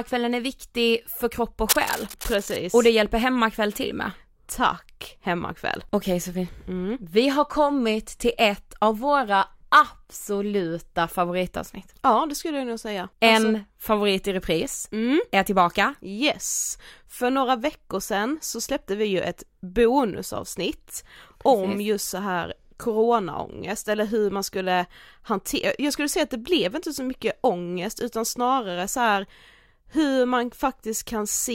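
A speech clip with cable scratch noise from 1.69 to 2.59 s, just after "viktig för kropp och". Dense, uneven bursts of scratching sit a little below the speech level. A worn cable or connector being moved is the likely cause, its contact resistance flickering rapidly.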